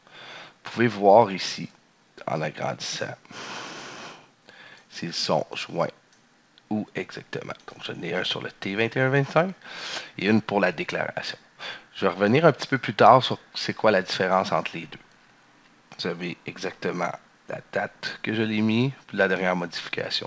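No technical faults can be heard in this audio, which comes over a G.722 call path with nothing above 8 kHz.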